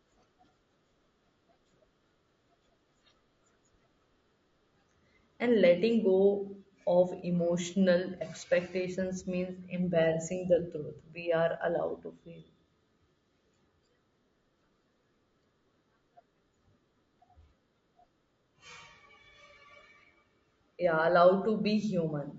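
Low-delay AAC compression runs through the whole clip. The speech sounds rough and grainy, with a hiss that fills the gaps between harmonics and a thin, artificial-sounding top band. This is likely AAC-ELD, the low-delay coder used for video calls. The damage here is plainly audible, which fits a bitrate of around 32 kbps.

AAC frame loss with concealment appears from 8.18 to 8.22 s. For about 30 ms the speech turns into a brief smeared, noisy or phasey patch, which fits a single lost frame. Because the frame never arrived, the decoder rebuilt that stretch from the last spectrum it had received, randomising signs or interpolating energy. The loss is short enough that the signal recovers without fading to silence.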